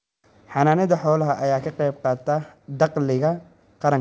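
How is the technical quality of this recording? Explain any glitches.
No audible glitches or faults.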